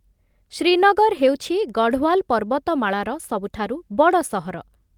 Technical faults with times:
none

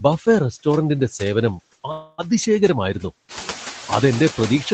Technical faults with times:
0.00-4.74 noise suppressor artifacts
1.91-2.27 call audio freeze

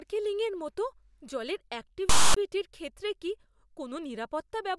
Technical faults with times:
2.09-2.37 file tags played as audio

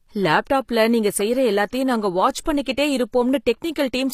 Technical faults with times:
0.00-4.14 HE-AAC compression

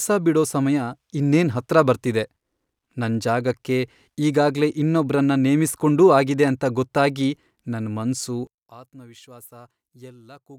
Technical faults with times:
8.47-10.58 one channel inverted

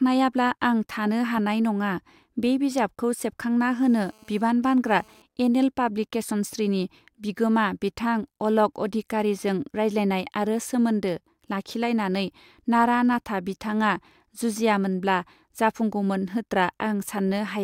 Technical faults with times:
3.87-5.22 GSM phone buzz

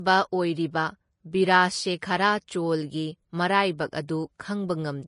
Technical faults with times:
0.00-5.08 Vorbis compression

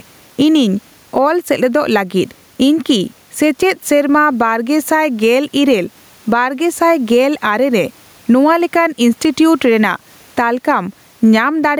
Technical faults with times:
0.00-11.79 gain pumping

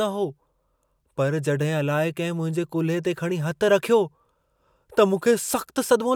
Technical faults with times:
none

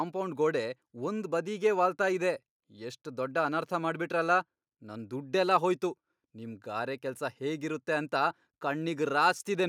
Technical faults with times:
none

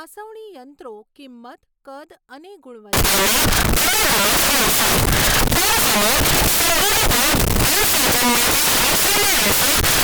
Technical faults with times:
2.93-10.03 samples built from the wrong bytes

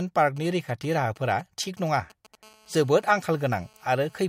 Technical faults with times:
0.37-2.35 GSM signalling bursts
2.43-4.24 GSM phone buzz

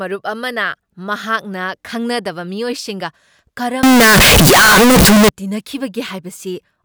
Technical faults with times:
3.83-5.29 float read as integer

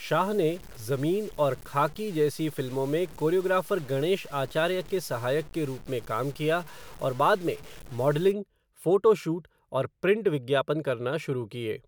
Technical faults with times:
0.00-8.32 low bit depth without dither

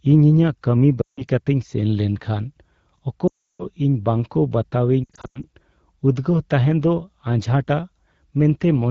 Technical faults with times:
1.01-1.25 lost AMR speech frames
3.28-3.66 lost AMR speech frames
5.03-5.45 lost AMR speech frames

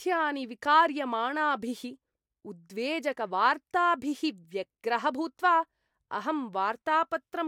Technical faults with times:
none

